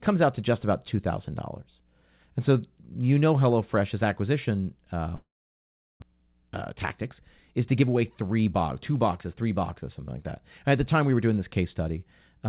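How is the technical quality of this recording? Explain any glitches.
The recording has two clear glitches in the middle of the speech, heard through a narrowband call path with nothing above 4 kHz, which fits a G.711 mu-law codec at 64 kbps.

From 5.16 to 6.04 s there is a long network dropout, likely caused by packets failing to arrive. The last sound smears into a fading buzz, then about 0.75 s of silence follows, and roughly 0.6 s of speech is skipped entirely. Unlike brief packet loss, this ends in silence and the lost speech never returns.

From 6.12 to 8.31 s, just before "box two boxes three", a jitter buffer speed-up trims repeated pitch-period slices, about a fifth of a second in total, to shed the delay built up after the dropout. Speech runs about 11% fast and sounds hurried, but pitch stays unchanged, which separates it from a simple playback-rate error.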